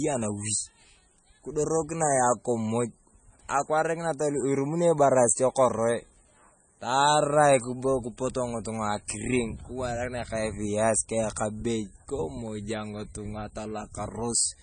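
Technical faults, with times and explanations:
Throughout, MP3 compression: the speech stops dead above 9.4 kHz and sounds watery and swirly, with weak frequency detail flickering on and off frame to frame. That heavy damage is likely a starved MP3 encoder, and it fits a bitrate near 24 kbps.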